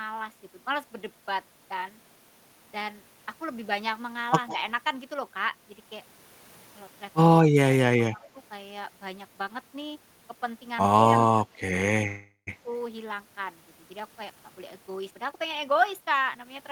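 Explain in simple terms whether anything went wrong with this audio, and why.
Around 4.47 to 4.56 s there's a faint copy of the speech about 0.16 s behind itself, an echo leak, likely from a loudspeaker whose echo canceller let some through.

At 8.08 to 8.35 s and again at 11.34 to 11.59 s the speech dips noticeably. That's speech suppressed in double talk, likely both sides talking at once, with this side's voice turned down along with the loudspeaker echo.

From 12.07 to 12.49 s the sound stalls into a fading buzz, with the last tenth of a second silent. That's a call audio freeze, likely from held-up packets, and nothing is actually lost afterwards.

From 15.1 s to the end, the speech runs about 18 percent fast at normal pitch. That's jitter buffer speed-up trimming roughly 0.3 s to catch up.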